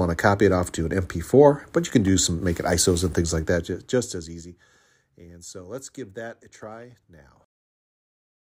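From 3.41 s to 4.84 s a fine ticking, zipping texture rides on the sound as the level drops by roughly 20 dB. This is zipper noise: the gain moves in discrete unsmoothed steps, around 300 per second, each leaving a tiny click.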